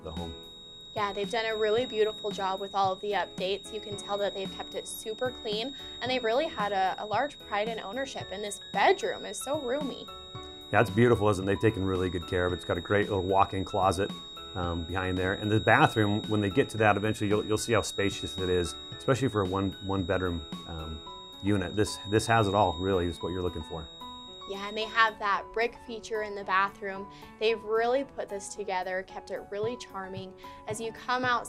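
Feedback whistle runs from the start to 25.19 s. A thin, steady tone at 3.8 kHz sits about 15 dB beneath the sound, swelling and fading slowly in level. The likely cause is a loudspeaker-to-microphone loop held just at the edge of feedback, sustaining one frequency without building up.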